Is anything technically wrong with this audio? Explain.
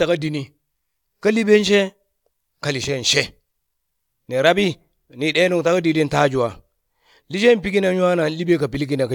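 No, nothing technically wrong stands out here; the speech comes across just as it should.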